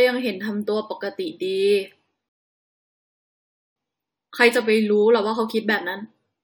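At 2.29 s the speech stops dead and silence holds until 3.76 s. This is a rebuffering stall. The player used up the audio it had downloaded and waited for more to arrive. When the data came, playback picked up at the exact point where it broke off. No speech is missing. The pause simply adds about 1.5 s to the clip, a gap that sounds unnatural mid-flow.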